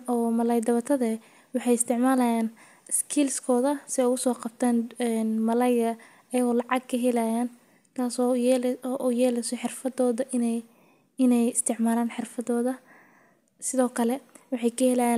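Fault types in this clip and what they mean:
There are no fault types in this clip.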